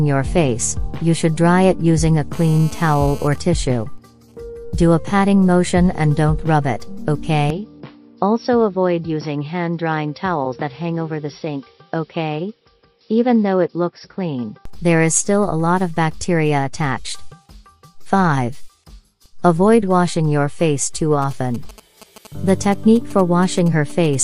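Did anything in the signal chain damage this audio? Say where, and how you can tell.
Yes. The analogue wiring picked up GSM phone buzz from 2.33 to 3.28 s. It is a hard, raspy buzz at 217 Hz, about 21 dB below the signal, with a dense stack of harmonics. It is steady and unrelated to the audio, which fits a phone in an active call. The handset transmits in 217 Hz radio bursts. An unshielded input or cable rectifies those pulses, and the demodulated envelope lands in the audio band.

GSM signalling bursts follow at the same stage. From 3.32 to 4.34 s the steady buzz breaks into a faint pattern of even ticks with a longer 217 Hz buzz twice a second, around 30 dB down. That pattern fits the same call with its user silent, when the phone sends only sparse bursts. A louder run from 21.22 to 24.15 s, roughly 20 dB below the signal, has a galloping dit-dit-dit rhythm. It points to call-setup or message signalling. 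Both are rectified in the analogue front end.

From 7.50 to 14.65 s the sound turns dull and boxy. Nothing reaches above 5.6 kHz. The level drops a few dB, and a new noise floor appears well below the signal. The change happens abruptly, with no gap, and it clears just as suddenly. This likely reflects an input switched to a poorer device at the driver level, such as another microphone or a headset call profile. That device has a narrower band, different gain and its own self-noise.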